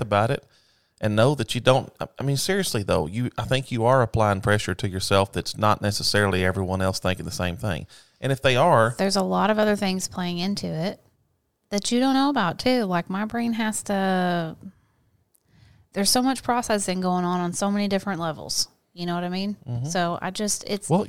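Dropped samples, heard as clicks at 6.39 s, 9.63 s and 10.43 s in the speech. Each is a single sharp tick with a thin vertical line in the spectrum. The likely cause is a fraction of a millisecond of samples going missing, so the waveform jumps straight from one value to a later one. That step is far too brief to remove any sound, but its abrupt edge sprays energy across all frequencies at once.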